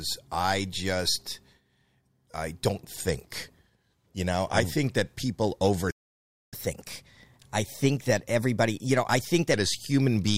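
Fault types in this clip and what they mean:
Playback stall: The sound cuts out at 5.90 s and stays silent until 6.54 s, about 0.61 s. The player likely ran short of data.
Catch-up at higher speed: From 6.54 s to 9.54 s the audio runs 1.1 times fast, pitch raised about a semitone and a half, recovering lost time.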